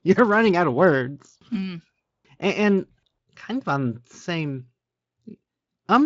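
No faults can be heard anywhere in the speech; there is nothing to flag.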